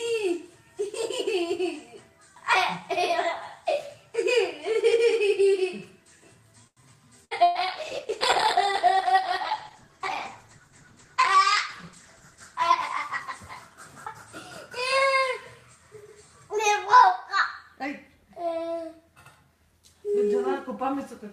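The audio is a call recording with several network faults clustered between about 6.7 and 14.7 s. A short stall from a late packet comes first, at 6.67 to 6.80 s. A packet arrived late and the jitter buffer ran dry. The receiver held the last sound for 92 ms until it came. Nothing is lost. The sound simply hangs too long, with a slight buzz or dip. Playback then runs 92 ms further behind. Two bursts of packet loss follow closely, at 7.25 to 7.34 s and 7.43 to 7.58 s. In each, the receiver extended the last sound and let it fade instead of going silent. The first burst drops 60 ms of audio, the second 120 ms. Each time the sound jumps ahead when it resumes, so the gap is audible as a skip. A call bitrate drop starts at 7.46 s, in the middle of the second loss burst. The encoder rate falls from 64 to 13 kbps. It sits at that floor for about 4.9 s and does not recover until 14.68 s. At so few bits the coding becomes coarse. 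The sound turns rough and watery, and the top end is trimmed, leaving it muffled. At 8.40 to 8.42 s there are chunks out of order. One 10.67 ms chunk lands one position late, after the chunk that should follow it. Nothing is missing, but the swap leaves three hard joins. They come across as a brief jumbled moment. Last, a jitter buffer speed-up runs from 12.20 to 13.07 s. Too much audio had built up in the buffer, likely left over from the earlier delayed packets. To cut the lag, the receiver removed short pitch-length slices in quick succession, about 50 ms in total. Playback runs at about 105 percent speed with unchanged pitch. That stretch sounds hurried.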